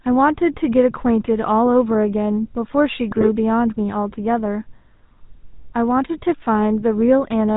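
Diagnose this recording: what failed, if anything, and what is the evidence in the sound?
GSM full-rate codec damage runs through the whole recording, placing the fault at the codec stage. The speech has the buzzy, gravelly roughness of that early coder and nothing above 4 kHz, which fits a 13 kbit/s full-rate stream. The codec models the vocal tract and excites it with regularly spaced pulses that keep only every third excitation sample. That coarse excitation is what sounds rough, and here the damage is plainly audible.

GSM bit errors hit from 3.10 to 3.28 s, a network-stage fault on top of the codec. For roughly 0.18 s the speech breaks into squawks, pops and gargling, consistent with several consecutive 20 ms frames arriving corrupted at an error rate of a few percent. Flipped bits in the filter, pitch and gain parameters make the decoder rebuild frames with a bent spectrum and erratic level, so the sound distorts abruptly and then recovers.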